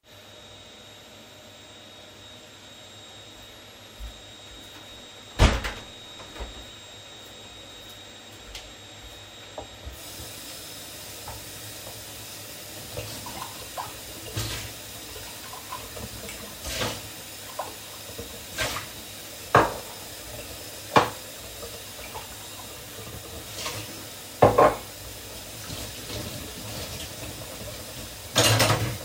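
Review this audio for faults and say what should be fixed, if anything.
Nothing in this recording needs fixing. No technical fault can be heard anywhere in the audio, so there is nothing to prevent.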